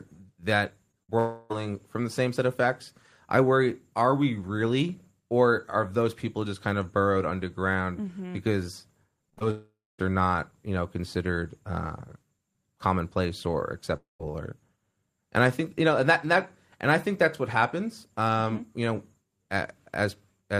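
Speech over a packet-based call with several concealment events. At 0.91–0.95 s a short concealed packet loss replaces about 20 ms of audio with a continuation of the preceding sound, leaving a brief smear. At 1.03–1.10 s a burst of packet loss removes about 60 ms, heard as the last sound held and fading before speech resumes further on. From 1.18 to 1.52 s a roughly 320 ms stretch is replaced by a continued, decaying buzz or hiss with no true silence. Two later gaps at 9.51–10.00 s (about 480 ms, the last 240 ms silent) and 13.96–14.21 s (about 240 ms, 160 ms silent) fade into silence before audio returns. All three long gaps are likely a long network dropout. At 9.30–9.43 s repeated packet loss produces choppy, robotic sound: three gaps, the longest 29 ms, are patched in quick succession, and about half of that span is concealed.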